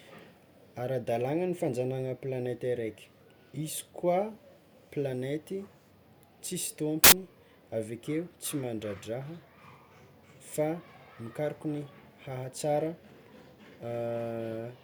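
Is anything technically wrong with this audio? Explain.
Yes. From 7.04 to 7.12 s, the speech turns into a burst of loud, harsh broadband noise. These are samples built from the wrong bytes. The reader assembles each sample out of misaligned or swapped bytes. The rapidly changing low bits become the dominant part of every value.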